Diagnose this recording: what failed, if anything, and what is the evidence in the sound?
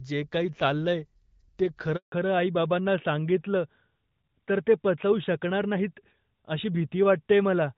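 A handover gap at 1.96 s, at the network stage: the speech decays within a few tens of milliseconds and stays silent for 160 ms until 2.12 s, while the call switches networks and no frames arrive. On a waveform it is a flat stretch; on a spectrogram, a blank vertical band.

From 2.12 s to the end there is a fallback to narrowband, a codec-stage change: the call drops from HD Voice to a narrowband codec, which fits a move from AMR-WB at 12.65 kbit/s to AMR-NB at 12.2 kbit/s. Nothing above 4 kHz survives, so the speech turns duller and rougher, and the spectrogram shows a hard ceiling at 4 kHz.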